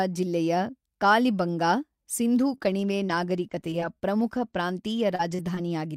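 From 2.47 s to 5.69 s, just after "ಜಿಲ್ಲೆಯ ಕಾಲಿಬಂಗಾ ಸಿಂಧೂ", the speech breaks into repeated packet loss with a robotic sound. Short stretches drop out again and again, the longest about 38 ms. Each hole is patched by stretching the preceding sound, which gives a choppy texture with pieces missing. On a spectrogram the harmonics flatten into brief frozen smears separated by thin gaps. The waveform shows repeated chunks and abrupt envelope steps across the span.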